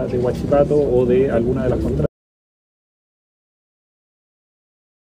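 At about 2.06 s there's an audio dropout to silence: the sound stops dead and stays silent to the end, likely a lost input or link.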